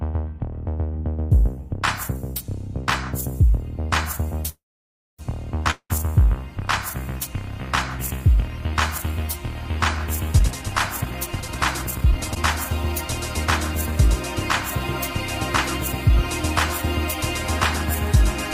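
A steady 60 Hz mains hum, with some low harmonics, runs under the whole recording at about 20 dB below the wanted signal. It comes from power-line current coupling into the signal path, typically through a ground loop or a nearby transformer. From 4.49 to 5.21 s there is a call audio freeze. The last sound is stretched into a fading buzz for a short moment and then gives way to roughly 0.6 s of silence. Playback then resumes exactly where it stopped, with nothing lost, but everything after it now runs about 0.69 s later. This is likely packets being held up in transit so that the receiver's jitter buffer ran dry and had to improvise until they arrived. Shortly afterwards, from 5.71 to 5.92 s, a long network dropout follows. About 0.19 s of synthetic fill, a decaying continuation of the preceding sound ending in roughly 70 ms of silence, stands in for audio that never arrived. When the sound returns it has skipped ahead, with about 200 ms of content missing. 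The likely cause is a burst of lost packets that were never recovered. From 10.39 to 12.36 s a jitter buffer speed-up makes the audio run at about 126% of normal rate while keeping its pitch, so this stretch sounds hurried. The receiver had built up more buffered audio than its target, typically after delayed packets land together. To bring latency back down, it repeatedly cut out short slices of one or a few pitch periods, removing around half a second in total across the two seconds.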